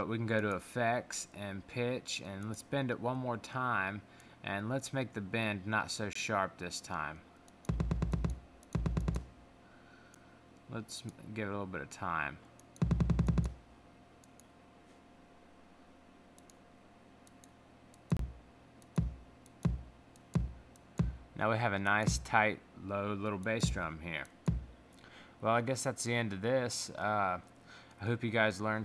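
Gaps between stream segments appear at 6.13–6.15 s, 10.15 s and 18.17–18.19 s, on 4 s segment boundaries. Mismatched time stamps leave hard-edged silent holes of 8.7 to 25.7 ms. No audio is lost.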